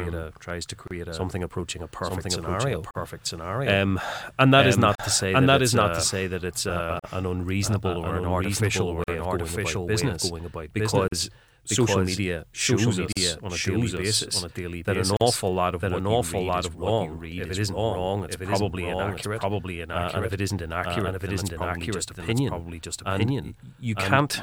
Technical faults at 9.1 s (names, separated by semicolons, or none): doubled audio track; gap at a join of encoded pieces